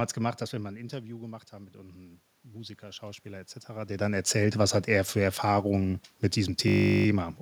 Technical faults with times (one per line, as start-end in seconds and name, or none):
1.52-4.87 automatic gain rising
6.68-7.06 system hang loop